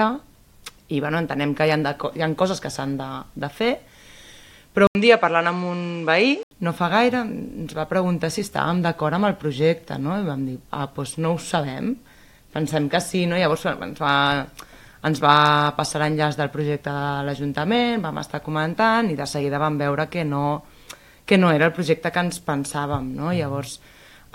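At 4.87 s the audio drops out for about 80 ms, then comes back duller, with nothing above 9 kHz and a new noise floor sitting roughly 30 dB under the signal. Loudness barely changes. At 6.51 s the full, brighter sound returns. That pattern is most likely an input switched to a poorer device: the system briefly changed to a narrower-band microphone with its own character and hiss, then switched back.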